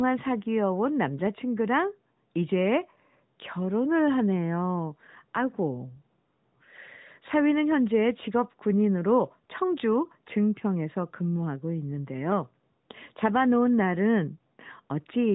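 No technical faults are audible.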